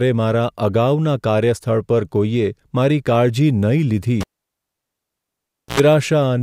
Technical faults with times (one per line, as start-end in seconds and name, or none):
4.21-5.80 cable pulled and plugged in